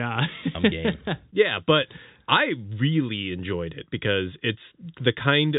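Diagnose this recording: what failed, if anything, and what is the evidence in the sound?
Nothing has failed here; the speech just has the narrow, telephone-like band of G.711 coding, with nothing above 3.8 kHz, which is simply how that format sounds.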